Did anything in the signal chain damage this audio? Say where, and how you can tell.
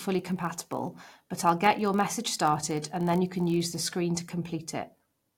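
Yes, there's a block size mismatch (padded) at the driver or buffer stage, from the start to 3.77 s. The speech carries a steady buzz at 46.9 Hz, which fits a 1024-sample read size at 48 kHz. One stage hands over blocks slightly shorter than the next one reads, and the shortfall gets zero-filled. That tiny gap in every block makes the buzz. The padding is so small that playback runs at 0.999 speed.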